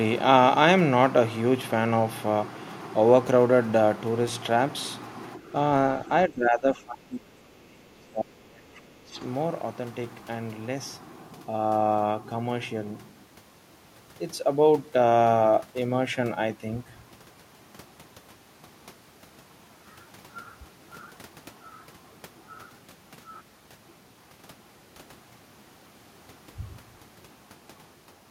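At 5.37 to 5.55 s the speech dips by about 10 dB, then from 6.27 to 9.2 s it drops sharply, by about 30 dB. This is likely speech suppressed in double talk by an echo canceller. At 22.90 s overlapping chunks cause a brief stutter: a 13 ms piece repeats at a 6 s chunk boundary.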